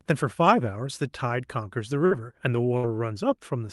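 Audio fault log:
2.05 to 2.14 s and 2.77 to 2.86 s, burst of packet loss: two short dropouts, each around 60 ms of audio gone. In each, the receiver stretched the last bit of sound it had for about 55 and 64 ms, fading it out, so you hear a brief held buzz or hiss rather than silence. Then the speech picks up a little further along, with the missing stretch simply skipped, over an Opus-style call path topping out around 12 kHz.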